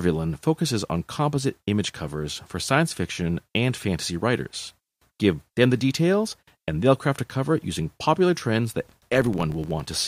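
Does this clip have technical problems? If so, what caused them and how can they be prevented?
Yes: after "using popular trends that", from 8.87 s to the end, a filter restarted on every block leaves a 43.1 Hz buzz, fitting 1024-sample blocks. Carry filter state across blocks.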